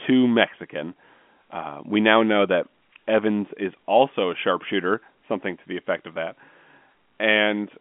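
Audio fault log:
No faults heard in this telephone-band speech.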